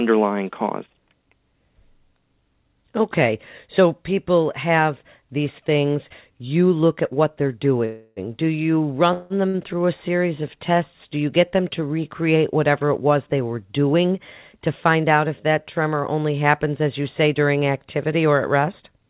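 At 7.85 to 8.20 s and again at 9.13 to 9.33 s, a call audio freeze continues the last sound as a fading buzz or hiss, likely from delayed packets draining the jitter buffer. About 315 ms and 169 ms are inserted, with nothing lost afterward. Unlike a drop, the speech resumes exactly where it stopped.

At 9.48 to 9.57 s, a short stall from a late packet stretches one sound by 58 ms before playback continues. It is much briefer than the freezes, a held sound rather than a fading fill.

From 13.94 to 15.04 s, a jitter buffer speed-up trims repeated pitch-period slices, about 70 ms in total. Speech runs at 107% with pitch unchanged, which sounds hurried rather than high.

Throughout, nothing is heard above 4 kHz, which fits a G.711 call path.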